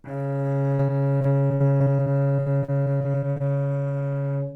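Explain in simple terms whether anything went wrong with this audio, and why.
From 0.75 to 3.42 s there is repeated packet loss: 21 short gaps, up to 60 ms each, patched by repeating sound, giving a choppy effect.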